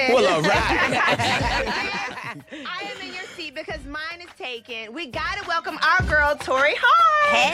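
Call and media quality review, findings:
Zipper noise, 4.97 to 5.89 s: ticking rides on a level move of about 10 dB, around 50 steps a second. Probable gain stage updating once per roughly 20 ms block, unsmoothed, each jump clicking.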